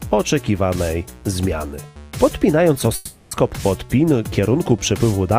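At about 2.95 s the audio suddenly gives way to a buzzy, hissy continuation of whatever was sounding just before, and that smeared tail fades over roughly 0.36 s without ever dropping to true silence. At 3.33 s the real audio returns, but it picks up later than where it broke off, so that stretch is simply gone. That pattern points to a long network dropout as the likely cause, with the receiver stretching the last sound to cover the hole.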